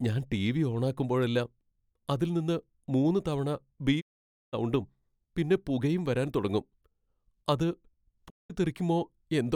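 After "അതിൽ നിന്ന് മൂന്ന് തവണ", the speech fades out within 20 ms and is silent from 4.00 to 4.55 s, then again from 8.28 to 8.52 s. This is a digital broadcast dropout: the receiver muted while it lost frames, roughly sixteen and six of about 32 ms each.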